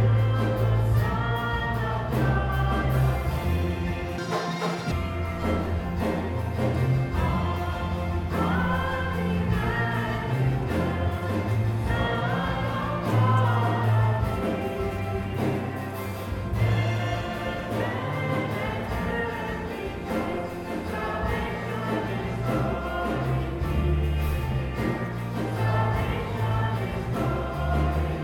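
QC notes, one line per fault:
4.18–4.92 s, audio read two samples at a time (double speed): for about 0.7 s the sound jumps to twice the speed and a full octave (12 semitones) higher. The reader treats each pair of samples as one frame, so playback races ahead and high frequencies fold back as aliasing.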